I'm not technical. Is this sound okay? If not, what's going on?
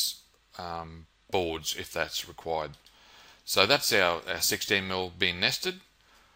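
Yes, this one's fine: nothing in it sounds broken or glitchy, so there's nothing to worry about.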